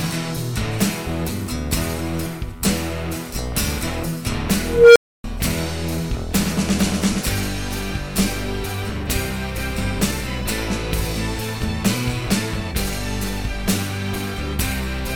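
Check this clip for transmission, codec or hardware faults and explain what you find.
One fault stands out, an unstable filter from 4.62 to 5.24 s. A recursive filter stage was fed bad coefficients, so each pass fed back more energy than it lost and its output grew without limit. A tone around 500 Hz swells over about 0.33 s into a loud, clipped squeal. The arithmetic then overflows and the audio drops out for about 0.28 s while the filter resets.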